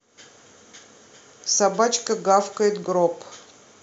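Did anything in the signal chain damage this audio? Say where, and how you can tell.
No, nothing in the signal chain has audibly damaged this speech recording. None of the stages, from wiring and conversion through to storage and playback, leaves a mark that can be heard here.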